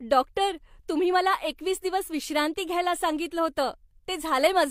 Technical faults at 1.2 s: none

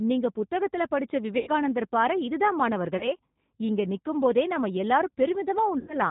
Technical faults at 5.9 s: G.729 codec; VoIP packet loss concealed by the speech codec

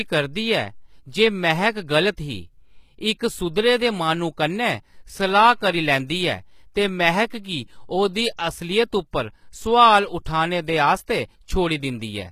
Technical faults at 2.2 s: HE-AAC compression

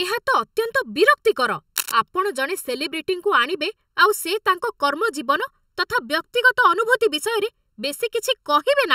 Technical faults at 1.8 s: channel delay (comb filtering); cable scratch noise

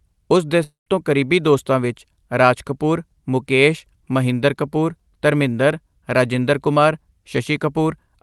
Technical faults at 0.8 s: long network dropout

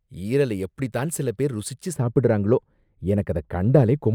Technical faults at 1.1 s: none

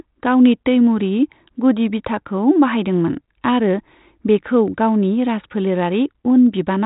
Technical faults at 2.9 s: none

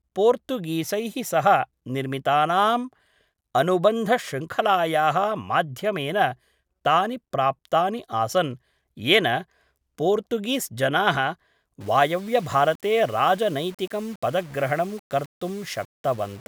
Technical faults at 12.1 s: low bit depth without dither

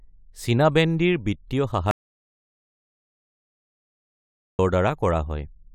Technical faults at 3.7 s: audio dropout to silence

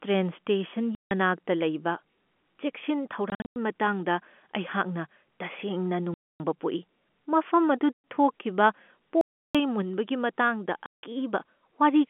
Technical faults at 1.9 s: none

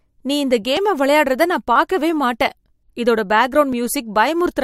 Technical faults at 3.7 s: overlap between stream segments

